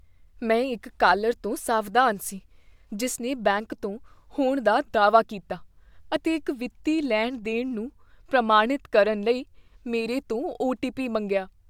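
No technical faults can be heard anywhere in the recording, and the signal stays steady and intact throughout the speech.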